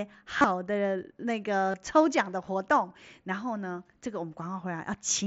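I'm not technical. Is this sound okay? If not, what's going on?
No. The speech has concealed Bluetooth headset packet loss at 0.38 to 0.44 s and 1.71 to 1.74 s. Bits went missing, and the phone filled the gaps with a brief buzzy repeat.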